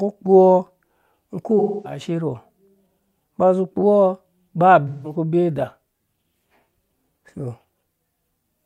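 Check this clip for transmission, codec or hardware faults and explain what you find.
Two dropouts of the same kind are audible in the speech. From 1.59 to 2.00 s, and again from 4.87 to 5.15 s just before "ku bee da", the sound turns smeared and noisy, like a phasey echo of the preceding moment. This is AAC frame loss with concealment: the decoder rebuilt the missing stretches, about 256 ms and 171 ms (which fits six and four lost frames), from the last good spectrum rather than the real signal.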